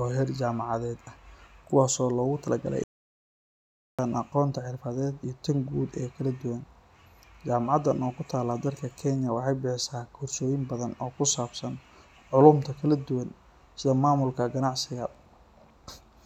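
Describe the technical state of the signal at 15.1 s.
At 15.1 s the speech signal is intact, with no dropout, clipping, distortion or other fault to be heard.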